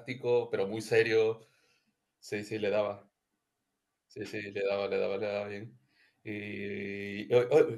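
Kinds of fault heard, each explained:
No technical fault can be heard in the recording; the speech signal stays steady and continuous with no breaks, distortion or level problems.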